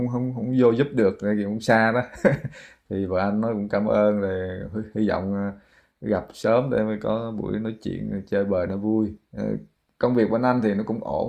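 No technical faults can be heard anywhere in the recording, which stays continuous and stable throughout.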